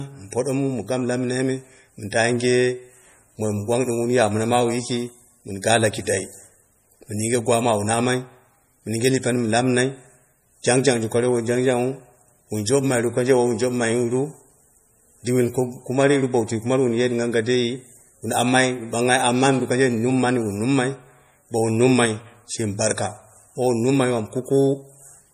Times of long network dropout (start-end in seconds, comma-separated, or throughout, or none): none